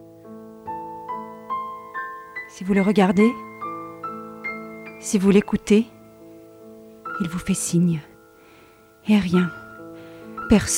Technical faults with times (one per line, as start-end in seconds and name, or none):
none